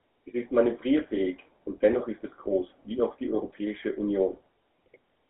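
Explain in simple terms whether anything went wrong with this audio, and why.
Yes, something went wrong: the whole clip, start to finish, has passed through the GSM full-rate codec, the old mobile-phone coder. It rebuilds speech from a rough model plus a thin pulse signal, so voices come out buzzy and gravelly, and everything above about 3.4 kHz is gone.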